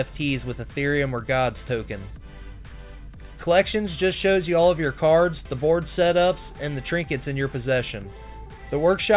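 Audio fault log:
No audible faults detected.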